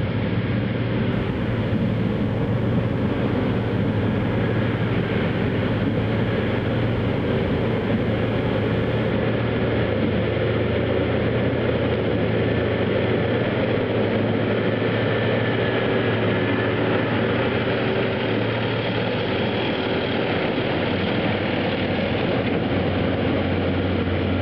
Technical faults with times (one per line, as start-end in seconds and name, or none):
1.12-9.12 mains buzz